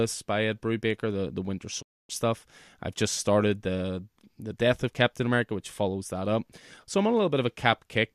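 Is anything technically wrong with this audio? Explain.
Yes. From 1.81 to 2.11 s the speech has a digital broadcast dropout. The receiver stopped getting valid frames and muted, fading out over about 20 ms. Roughly 264 ms of programme is missing, consistent with 11 consecutive frames failing.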